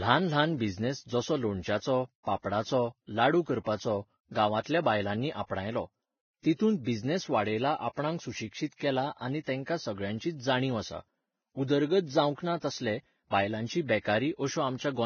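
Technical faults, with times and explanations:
throughout: heavy Vorbis compression, likely the cause of the hiss and grain. Nothing survives above 6.6 kHz, and treble detail turns to noise, pointing to roughly 17 kbps, unlike broadband static.
4.63–4.66 s: pre-echo. A short hiss spreads about 31 ms before an attack, because block-wide quantisation noise fills the quiet gap; unlike a click, it precedes the onset and softens it.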